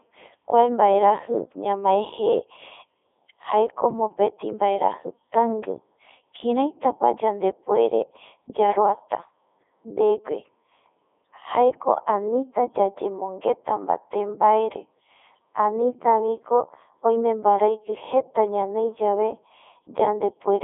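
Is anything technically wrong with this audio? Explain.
Yes. Throughout, the speech carries Codec 2 vocoder damage: only pitch, voicing, energy and spectral envelope survive, resynthesised from sine waves, giving buzzy, robotic speech in a 300 Hz to 3.5 kHz band, consistent with the 3.2 kbit/s mode.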